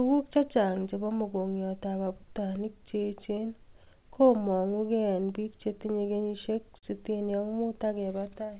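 Clock drift between sender and receiver runs through the whole clip: the sender's clock is running roughly five percent slow, so the receiver keeps running short on audio. From 0.17 to 8.47 s you get repeated timing corrections, with the receiver repeating small slices to keep up. That plays back at 96% speed, adds about 0.3 s overall, and gives a faintly uneven, dragging tempo. At 6.78 to 6.86 s there's a short stall from a late packet. The buffer ran dry, so 42 ms of held sound with a slight buzz or dip fills the gap, then playback resumes with nothing lost. All of it sits on the G.711 narrowband sound, which has nothing above 4 kHz.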